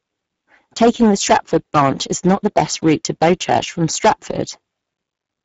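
Hard clipping runs throughout: driven about 13 dB past full scale, about 3% of the samples are sheared flat, giving a harsh fuzz on every loud syllable. Speex codec damage is also present for the whole clip, plainly audible as hoarse, noisy speech starved of excitation bits, pointing to a low bitrate near 10 kbps, with nothing above 7.7 kHz.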